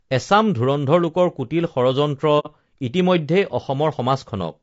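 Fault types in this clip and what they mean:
Low-delay AAC compression: The speech was likely coded with a low-delay AAC codec such as AAC-ELD, at a rate consistent with about 32 kbps. Its short frames resolve pitch harmonics poorly, so throughout the clip the voice sounds plainly rough and grainy, with noise between harmonics and a thin, artificial top end.
AAC frame loss with muting: Coded frames were dropped and the decoder replaced them with silence, fading out and back in across the overlapping windows. From 2.39 to 2.47 s the speech falls into a brief, soft-edged hole.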